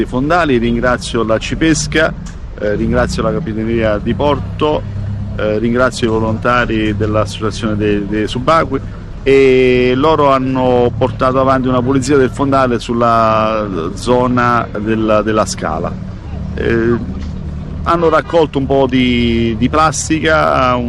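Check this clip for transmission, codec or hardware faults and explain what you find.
There is one fault, present for the whole clip: hard clipping. The signal is driven roughly 5 dB past full scale, so about one percent of samples flatten against the ceiling. Peaks crackle, the waveform shows squared-off tops, and the spectrogram shows bright vertical streaks of high harmonics at each loud moment.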